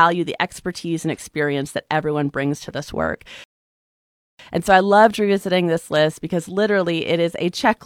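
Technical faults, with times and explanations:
3.44–4.39 s, rebuffering stall: the speech halts into flat silence for 0.95 s, a blank gap on the waveform and spectrogram, then resumes exactly where it stopped.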